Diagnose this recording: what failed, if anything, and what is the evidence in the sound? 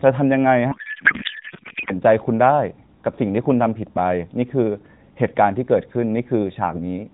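Codec payload misread at the codec stage, 0.72 to 1.91 s: speech becomes garbled warble, not packet-loss gaps, which points to octet-aligned AMR frames unpacked as bandwidth-efficient.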